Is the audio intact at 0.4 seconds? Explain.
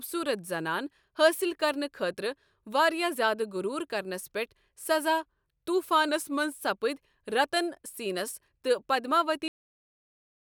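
Yes, at 0.4 s the speech plays through intact, with no dropout, click or other fault audible at that moment.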